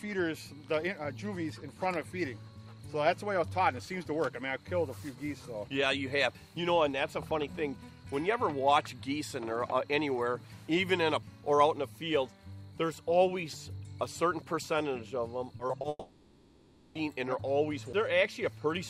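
At 11.22 s there's a CD skip: a tiny tick, with the sound muting for just a few milliseconds before carrying on from a different spot. The laser got knocked or hit a flaw and jumped to another turn of the disc's spiral, so playback lands ahead of or behind where it should be. The same thing happens again at 17.93 s, with a slightly longer but still very brief mute and the same abrupt jump in continuity.

Between 15.57 and 15.85 s you get repeated packet loss, the choppy, robotic stuff. Over that stretch there are four short holes, the longest about 20 ms, adding up to about 80 ms, so nearly a third of that span is patched rather than real. Each hole is filled by stretching the last bit of sound, and the next one arrives before things settle, which gives that broken-up texture with slivers missing.

Right after, from 15.89 to 16.97 s, comes what's most likely a long network dropout. The sound gives way to a fading continuation of whatever came last, and that carries on for roughly a second before a very short stretch of silence. 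When the audio returns, it picks up further along, and the part in between is simply gone.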